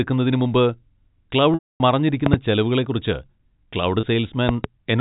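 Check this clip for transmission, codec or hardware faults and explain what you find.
There are two kinds of fault here: two dropouts patched over by packet loss with pitch repetition, and two pairs of loud pops. All of it sits on top of the narrow telephone band you'd expect from G.711 coding.

The packet loss with pitch repetition is at 1.54 to 1.80 s and again at 4.00 s. The receiver loops the last pitch period to cover the missing audio. The 260 ms gap is too long to sustain, so it fades out and then cross-fades back in. The 30 ms one comes across as a brief buzzy hold.

The loud pops come as two sharp pops between 2.26 and 2.36 s, peaking around 20 dB above the sound, and another two between 4.49 and 4.67 s at roughly 15 dB. They're likely caused by voltage steps from a switch, static or a driver glitch, with the sound carrying on underneath.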